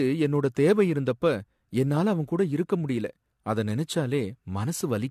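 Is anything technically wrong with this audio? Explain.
Yes. Generation loss runs throughout the speech. It sounds swirly, hollow and smeared, with blurred attacks, more degraded than a single encode would leave. The likely cause is repeated AAC-LC encoding, roughly three passes, at what sounds like 64 kbit/s. A spectrogram shows nothing above 14.2 kHz.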